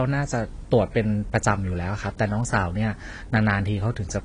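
From start to finish the speech carries a steady, thin hiss, around 30 dB below the voice, that grows markedly brighter toward the top of the band. That is low bit depth with noise shaping, which fits a signal reduced to about 10 bits with the rounding error pushed upward in frequency. Unlike broadband tape or mic hiss, it is tilted sharply treble-ward and never changes with level.

Alongside it, the speech has nothing above 10.2 kHz and sounds dull and smeared, with an audible warbling, fizzy texture on sustained sounds and sibilants. The likely cause is AAC compression at a low rate, consistent with AAC-LC near 32 kbps. Its swirly, time-varying artefacts set it apart from a plain low-pass filter.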